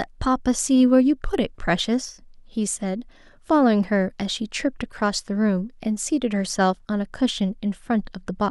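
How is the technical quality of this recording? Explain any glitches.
No technical faults are audible in this speech recording, so there are no glitches to explain.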